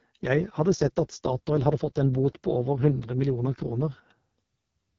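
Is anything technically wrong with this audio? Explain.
Yes. Throughout the speech, the AMR wideband (HD Voice) codec runs at a rate that fits its lowest 6.6 kbit/s mode. Its pulse-driven vocal tract model is starved of bits, so the sound is heavily rough and raspy. A spectrogram shows a hard ceiling near 7.2 kHz and a hazy, noise-filled band just below it.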